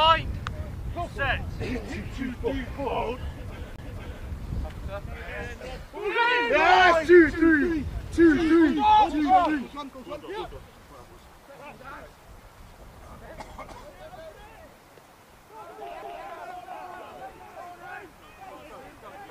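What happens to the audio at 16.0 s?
At 16.02 s there's a CD skip: the laser hops to another turn of the spiral, so you get a tick, a mute of a couple of milliseconds, and the audio jumps.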